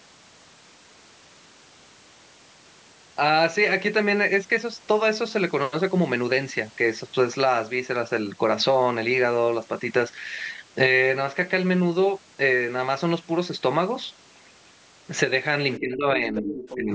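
From 15.79 s to the end, the speech sinks by up to about 15 dB. The likely cause is speech suppressed in double talk, with the echo canceller ducking the talker.

From 16.36 to 16.77 s, a second voice sits about 10 dB under the talker. This is likely the other side's voice leaking through, as loudspeaker echo the canceller missed.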